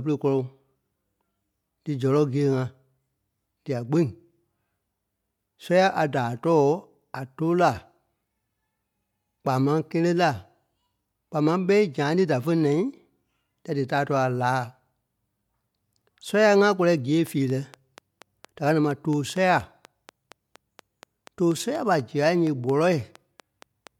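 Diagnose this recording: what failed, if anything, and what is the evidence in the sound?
Something went wrong on the analogue side. From 17.27 s right through to 23.88 s there's a train of clicks, around thirty of them, ticking along at a steady 4.24 per second. Each click looks much the same and pokes up roughly 5 dB above the speech. A regular, repeating pulse like that is likely coming from interference from nearby gear, a flaky connection or a misbehaving power supply injecting spikes into the signal path.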